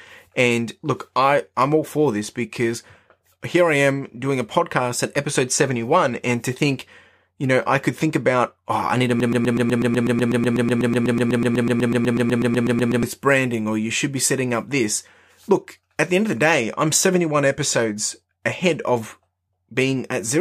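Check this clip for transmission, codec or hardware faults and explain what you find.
One fault is present in this speech clip. A broken-record loop runs from 9.20 s to 13.03 s, between "oh I need to" and "this branding or you". The stream likely stalled and kept replaying the last fragment it held: a 0.12 s piece repeats 31 times back to back, producing a rapid stutter, and the speech that belonged in those seconds is gone.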